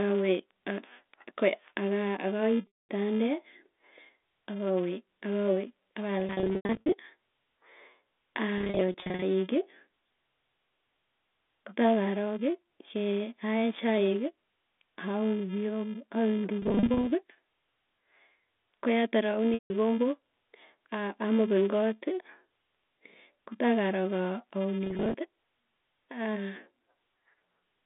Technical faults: filter restarted on every block; packet loss with pitch repetition

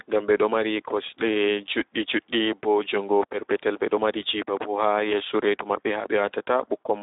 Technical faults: Speex codec

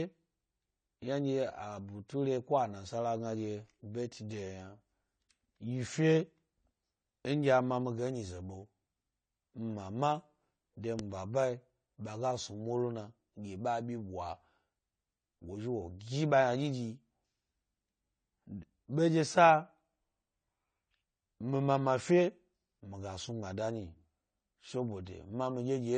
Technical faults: AAC compression; pre-echo

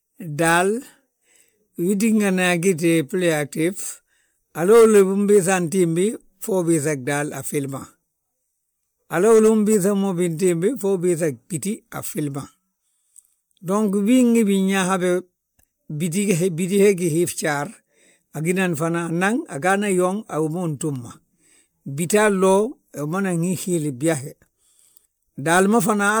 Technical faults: generation loss

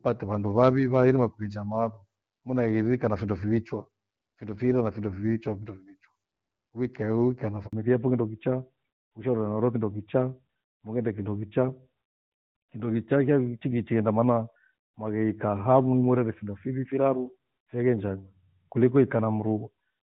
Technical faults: handover gap; fallback to narrowband

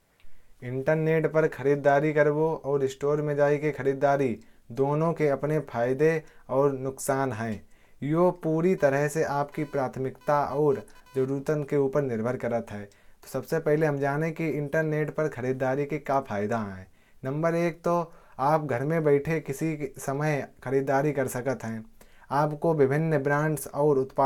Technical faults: computer activity noise

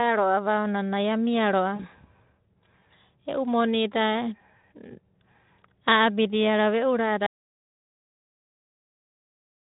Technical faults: VoIP packet loss concealed by the speech codec; audio dropout to silence

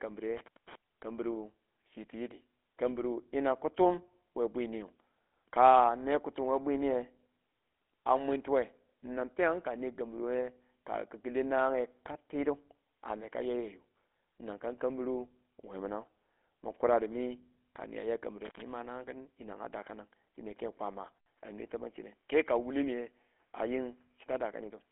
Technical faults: GSM full-rate codec; intermittent contact; input switched to a poorer device

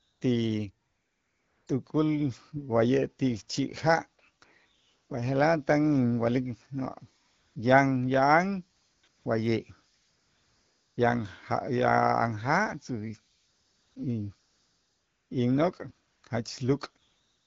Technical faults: AMR comfort noise

